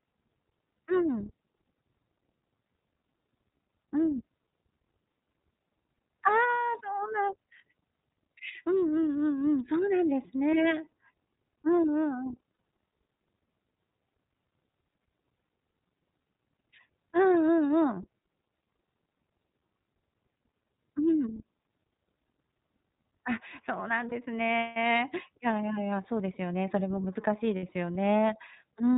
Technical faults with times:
0.00-28.97 iLBC codec
12.53-12.59 lost iLBC frames
24.09-24.13 lost iLBC frames
27.57-27.63 lost iLBC frames

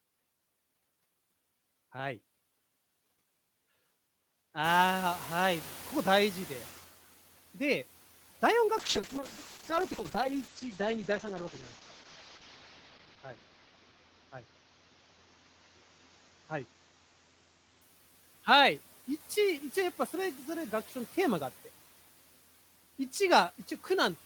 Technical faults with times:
0.00-24.26 noise suppressor artifacts
4.64-6.86 noise suppressor catching up
8.79-17.87 call bitrate drop

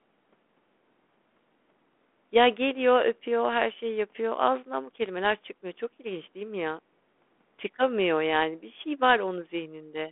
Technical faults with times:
5.06 DC step

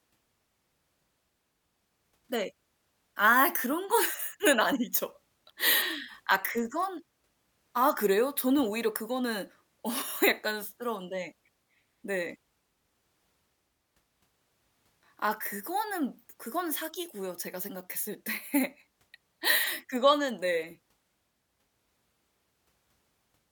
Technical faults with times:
none

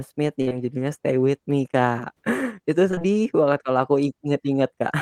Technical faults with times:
0.41-0.54 burst of packet loss
0.49-0.53 short concealed packet loss
2.91-3.07 repeated packet loss (robotic sound)

